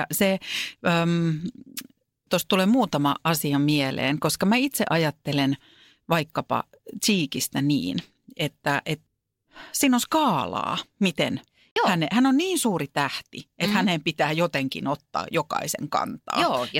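At 11.71 s the speech drops out completely for about 50 ms, resuming at 11.76 s with no fade in or out on either side. The gap is clean digital silence rather than noise or a level dip. This is most likely a Bluetooth stall: radio interference delayed packets on the wireless link, the receiver's playback buffer emptied, and output halted until the retransmitted audio arrived, after which the stream continued.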